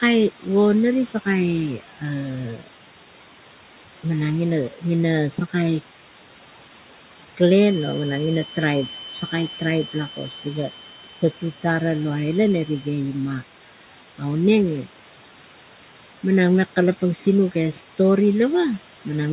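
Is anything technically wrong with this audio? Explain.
Yes. There are three problems.

Noise suppressor artifacts run through the whole clip. The suppressor pulls noise-like bands down by about 12 dB, frame by frame. The room noise sinks in the gaps and returns under the speech.

Speech cut by the noise suppressor occurs three times: 1.13 to 2.03 s, 2.56 to 2.68 s, and 9.13 to 11.64 s. The suppressor mistook parts of the speech for noise. It dropped them by about 10, 12 and 13 dB. The affected portions total roughly 150 ms, 100 ms and a full second. Those parts sound swallowed and faint.

A feedback whistle sits under the sound from 7.54 to 13.03 s. It is a thin, steady tone at 3.1 kHz, roughly 15 dB below the speech, swelling and fading slowly in level. The likely cause is a loudspeaker-to-microphone loop held just short of runaway. The room noise stays about 16 dB under the speech. Nothing is heard above 4 kHz, which fits a 64 kbps G.711 call codec.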